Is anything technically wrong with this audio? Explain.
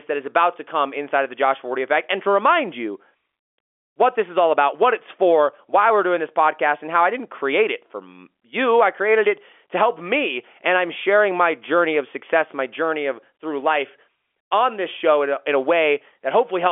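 No, the speech sits in the ordinary narrow band of G.711 telephone coding, spanning 300 Hz to 3.4 kHz with nothing above 3.7 kHz, and the signal shows no technical fault.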